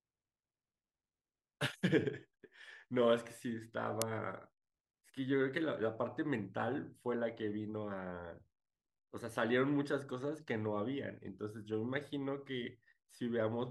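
At 4.02 s the speech is broken by an uninitialised buffer: a single block lasting about 1.33 ms was sent to the output before any audio had been written into it, so whatever values were left in that memory were played as samples. The length of the event fits a 64-sample buffer. It sounds like a sharp, loud click of digital noise, brief enough to register as one crack.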